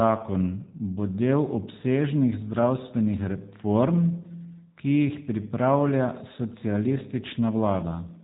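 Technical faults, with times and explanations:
Throughout, G.729 codec: each short frame is resynthesised from a vocal tract filter, a pitch predictor and a handful of pulses, which fits an 8 kbit/s stream. The result is a plainly rough, buzzy timbre. A spectrogram shows a hard ceiling at 3.8 kHz with smeared harmonics below.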